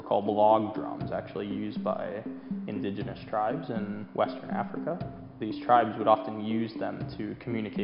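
Nothing in this audio stood out as a technical problem on listening.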